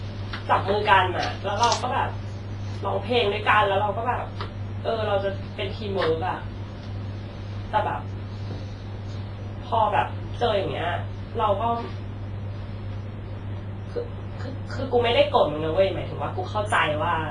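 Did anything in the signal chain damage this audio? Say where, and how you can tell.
Yes, at the codec stage. The speech sounds smeared and washy from start to finish, with a ringing quality and a hiss that swells and fades with the voice, while nothing gets through above 10.5 kHz. That points to heavy WMA compression, likely at a low bitrate around 24 kbps. The long transform blocks spread quantisation noise over tens of milliseconds, and the starved encoder zeroes weak spectral lines and cuts off the top band entirely.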